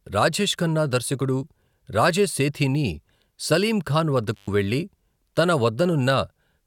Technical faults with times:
4.34-4.49 intermittent contact

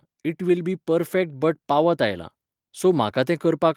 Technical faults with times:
0.38-2.28 automatic gain rising

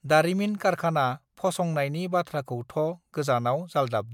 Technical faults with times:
none

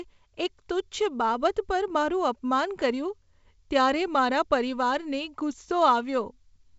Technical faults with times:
none

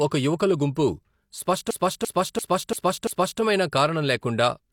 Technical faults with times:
1.71-3.41 system hang loop

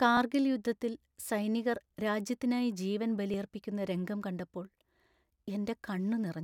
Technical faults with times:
0.17-5.44 clock drift buffer slips

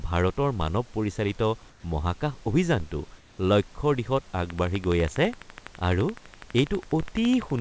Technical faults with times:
1.70-1.84 comfort noise in place of the background
2.80 DC step
3.18-3.38 comfort noise in place of the background
3.36-3.38 onset clipped by the voice detector
4.50-7.60 train of clicks
7.03 DC step

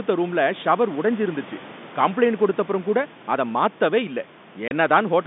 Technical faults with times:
4.68-4.71 packet loss filled with silence

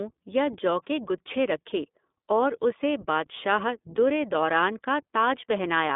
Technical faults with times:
0.00-5.95 iLBC codec

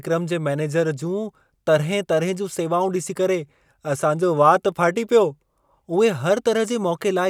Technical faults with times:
none

